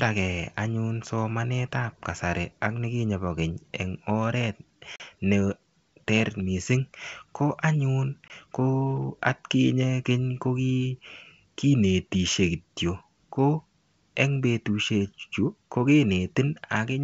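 On this G.722 wideband speech call, with the faint upper-band hiss of what sounds like the full 64 kbit/s mode, packet loss on an ADPCM call drops about 40 ms (roughly two packets) at 4.96–5.01 s and about 20 ms (one packet) at 8.28–8.31 s. Each drop leaves a hard-edged silent hole. The decoder's adaptive predictor and step size then lose step with the sender's, so speech returns with brief, slight distortion before settling.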